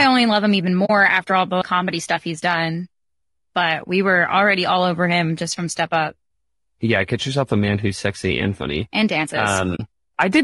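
Throughout the speech the voice sounds rough and grainy, with noise filling the gaps between harmonics and a thin, synthetic top band. This is likely low-delay AAC compression (AAC-ELD) at a bitrate around 32 kbps, where short frames resolve pitch poorly and leave too few bits.

At 0.85 s, right after "only love him even" and before "after all the comedy", the sound fades out into a soft-edged gap of about 40 ms and fades back in. This is AAC frame loss with muting, consistent with two lost frames whose spectrum the decoder zeroed, while the overlapping windows smooth both edges. The same brief hole recurs at 9.76 s, just after "and funny and dances".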